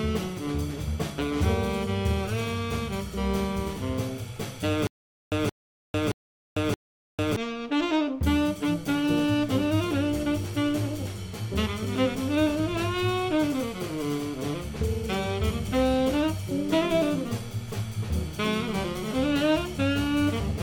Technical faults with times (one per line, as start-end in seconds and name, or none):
4.87-7.36 stutter with silent gaps